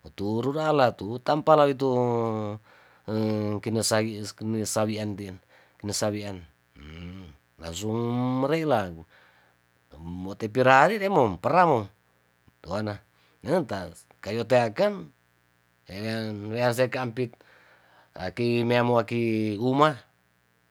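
A speech recording with a steady, raspy mains buzz underneath it from start to finish. It's built on 60 Hz, with sharp spikes twice per mains cycle from something like a dimmer or an unshielded cable, and the harmonics climb into the kilohertz range. It sits roughly 40 dB below the speech.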